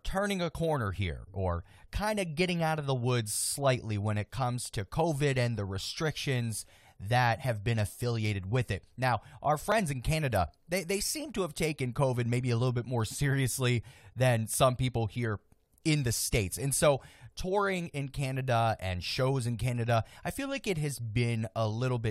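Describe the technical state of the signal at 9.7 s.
At 9.72 s the speech has an overlap between stream segments. Two segments' time stamps overlap, so the player trims audio that was never duplicated. About 14 milliseconds vanish. The waveform jumps, heard as a tiny skip, fitting 6-second segments.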